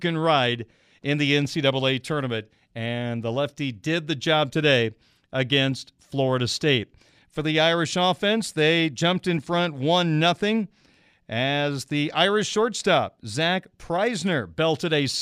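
Sample clock jitter from 1.26 s, after "ride in", onward: a clock wavering by around a microsecond mistimes samples, adding roughness about 40 dB below loud, bright speech.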